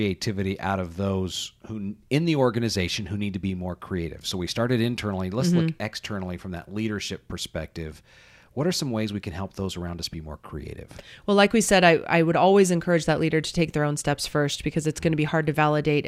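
No technical faults are audible.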